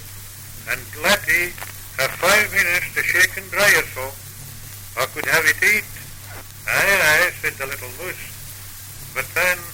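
Nothing in the audio stood out as a technical fault on listening.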